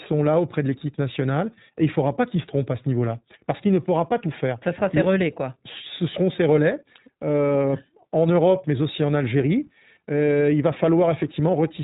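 Throughout the speech, the sound is muffled and band-limited, with nothing above 4 kHz, and it has a plainly audible rough, slightly synthetic grain. This is iLBC codec damage. Each frame's excitation is coded independently, which fits the 20 ms, 15.2 kbps mode.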